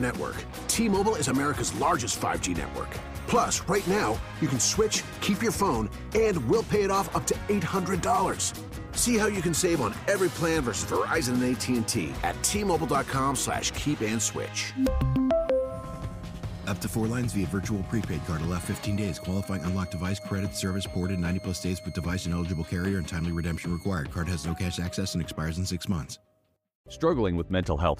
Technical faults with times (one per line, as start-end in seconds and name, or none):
18.47-23.94 switching supply whistle